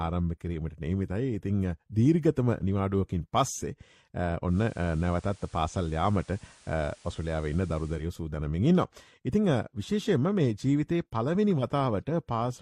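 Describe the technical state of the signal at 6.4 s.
At 6.4 s the digital radio has blended to its analogue FM feed, from 4.45 to 8.06 s. Faint hiss appears, and level shifts about 1 dB.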